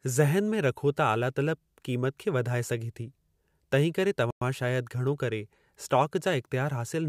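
A Bluetooth stall interrupts the speech at 4.31 s, cutting it to silence for about 0.11 s before the audio resumes at 4.42 s with "शायदि घणो करे". The gap is clean rather than crackly. The likely cause is radio interference delaying packets on the wireless link, so the headphones' buffer empties and playback halts until the retransmitted audio arrives.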